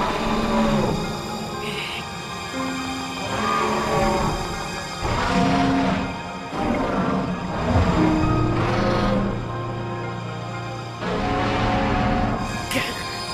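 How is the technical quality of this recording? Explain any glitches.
The recording has one clear glitch. From 2.69 to 5.26 s, a train of clicks ticks steadily at 6.25 per second, about fifteen pulses rising roughly 5 dB above the sound, likely from equipment interference, a faulty connection or a faulty power supply.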